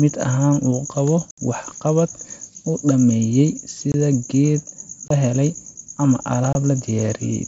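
Unconcealed Bluetooth headset packet loss drops voice packets between headset and phone, and nothing fills the gaps. There is a 68 ms hole at 1.31 s, between "uu qabo" and "waxqabad uu dhammeeyey". Abrupt 23 ms holes follow at 3.92 s, at 5.08 s before "beelay ama", and at 6.53 s after it.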